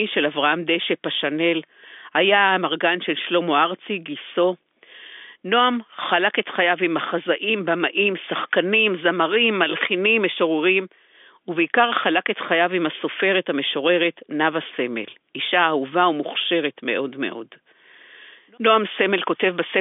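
No technical faults are audible.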